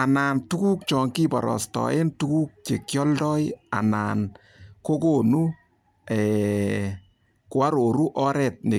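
No technical faults can be heard in this speech recording. At no point does anything in the sound call for a timestamp.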